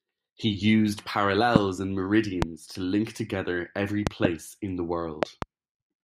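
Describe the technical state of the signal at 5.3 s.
At 5.3 s there is a loud pop, heard as two sharp thumps between 5.23 and 5.45 s, right after "in the", peaking roughly 20 dB above the speech, which continues underneath. The likely cause is a sudden voltage pulse, such as a plug, switch or static discharge.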